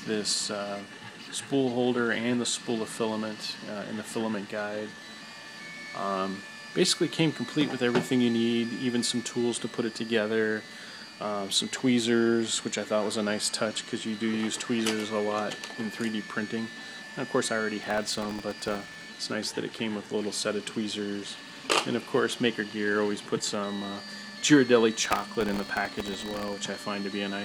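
From 17.83 to 19.06 s, and again from 25.05 to 26.53 s, there's processor overload crackle: the machine keeps missing tiny sub-millisecond buffer deadlines, repeating stale audio with hard edges each time, so a gritty tearing rides on the sound until the load eases.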